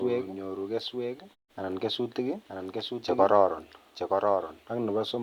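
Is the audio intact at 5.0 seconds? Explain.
No. A doubled audio track runs through the whole clip, including 5.0 s: a second full-band copy of the speech trails about a second behind, a few decibels quieter and without reverb, most likely from a slower second capture path mixing in.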